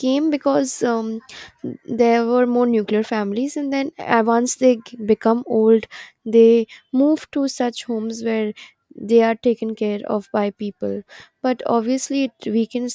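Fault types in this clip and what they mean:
Nothing stood out on listening to this speech clip.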